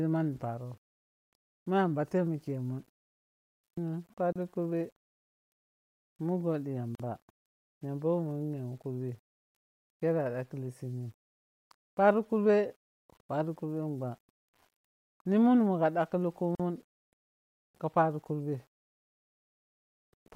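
From start to finish the speech carries a grainy, rough edge that rises and falls with the voice and sits roughly 40 dB below it, most audible as grit on quiet syllables and decays. The likely cause is low bit depth without dither, near 9 bits with plain rounding, so the error tracks the signal.

At 4.33 s (31 ms), 6.95 s (45 ms) and 16.55 s (44 ms), the sound cuts to brief silence with smeared edges and then resumes exactly where it stopped. This is a gap at a join of encoded pieces, where encoder start delay and end padding were left in. A packet dropout would instead skip material.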